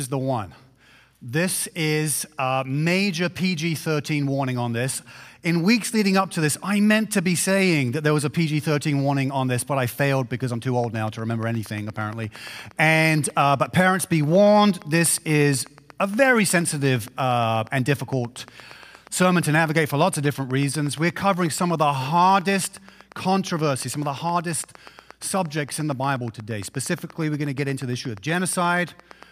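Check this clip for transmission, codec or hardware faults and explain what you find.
One fault is present: a train of clicks running from 10.84 s to 29.24 s, right through to the end of the clip. Pulses of nearly identical shape arrive at a steady 8.5 per second, roughly 150 in all, and their peaks reach about the level of the sound itself. The strict regular spacing likely points to electrical interference from nearby equipment or a faulty connection or power supply injecting a repeating pulse. It is heard as even ticking laid over the sound and continuing through the pauses.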